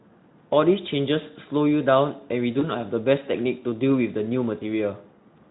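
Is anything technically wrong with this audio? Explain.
Yes. VoIP packet loss concealed by the speech codec occurs at 2.59 to 2.70 s and at 4.59 to 4.66 s. Each time, about 20 ms of audio went missing, which fits a single lost frame, and the Speex decoder filled the gap by extending its last pitch and filter. This produces a brief buzzy or noisy smear that fades, and the sound stays weak or distorted just after each dropout, within speech that carries light Speex coding throughout.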